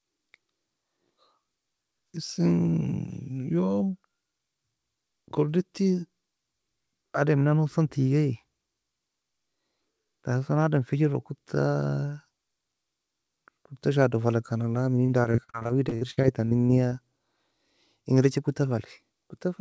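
From 15.06 to 16.93 s the speech turns choppy and robotic, with pieces dropping out in quick succession. This is repeated packet loss: audio packets kept arriving late or not at all, and each hole, the longest about 64 ms, was papered over by stretching the preceding sound, about a quarter of the stretch in total. The band stops at 8 kHz throughout, which fits a wideband call codec such as G.722.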